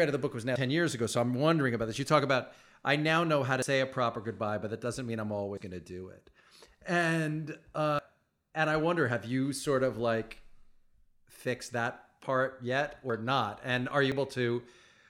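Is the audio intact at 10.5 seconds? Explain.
Yes, at 10.5 seconds the speech plays through intact, with no dropout, click, distortion or other fault to be heard at that moment.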